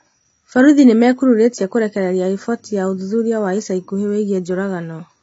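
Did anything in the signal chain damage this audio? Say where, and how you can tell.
Yes, at the codec stage: the speech is dull and smeared throughout, with nothing above 7.6 kHz and a warbling, fizzy edge on sibilants. This is likely AAC compression at a low bitrate, around 24 kbps, where the encoder drops the top band and coarsely quantises the rest.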